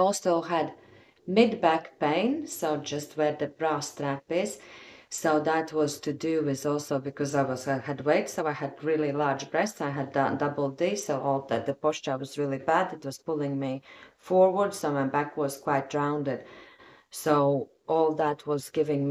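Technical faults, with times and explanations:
No technical faults are audible anywhere in the clip.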